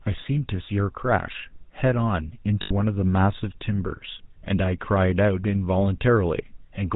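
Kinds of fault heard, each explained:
GSM full-rate codec: The whole clip has passed through the first GSM speech codec. It models the vocal tract as a filter and drives it with a sparse train of evenly spaced pulses. Only every third excitation sample survives. Nothing above 4 kHz gets through, so the top end is dull. The codec damage is plainly audible as a buzzy, gravelly roughness on the speech. The coarseness fits the 13 kbps full-rate mode.
lost GSM frames: From 2.62 to 2.71 s, a short stretch of speech is missing. The decoder filled the gap by repeating the settings of the last good frame. That substitute sound is a held, rough, metallic ring rather than real speech. The gap is about 80 ms, which fits about four lost 20 ms frames. It is too short to fade fully to silence before normal decoding resumes.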